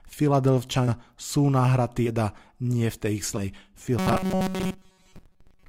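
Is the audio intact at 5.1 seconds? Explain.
No. At 5.1 s the speech is inside a stretch of robotic sound from repeated short buffers that runs from 3.99 s to the end at 5.69 s. The likely cause is audio arriving too seldom, so playback keeps looping a very short slice, about 5.3 ms, while most of the real signal is dropped. That loop rate imposes a fixed 188 Hz pitch, turning the voice into a flat, metallic buzz that only loosely tracks the words.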